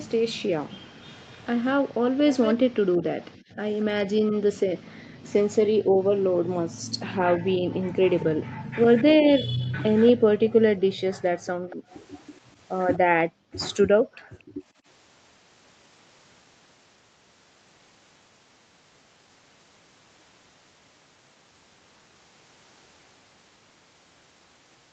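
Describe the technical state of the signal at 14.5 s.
At 14.5 s the background is gated by the echo canceller. This runs from 12.99 to 14.84 s. While the loudspeaker played, the canceller turned the microphone down hard, by about 40 dB at its deepest. The room sound drops away, then returns on release.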